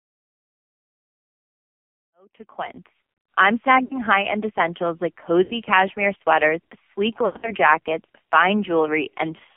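The whole clip carries AMR narrowband mobile codec damage. The band runs only from 200 Hz to 3.4 kHz. Heavy buzz and a synthetic edge fit a low mode near 5.9 kbps.

After a smooth fade-in from around 2 s to 3.53 s, lost AMR speech frames follow. The decoder reuses old pitch and vocal tract settings with falling gain. At 3.84 to 3.98 s, about 60 ms drops into a brief warble. At 5.44 to 5.53 s, between "essentials like" and "cashmere sweaters sleek", another 60 ms dips. From 7.26 to 7.53 s, after "cashmere sweaters sleek", losses scatter over about 160 ms. The longest run is 100 ms, drawn out and fading before the sound returns rough.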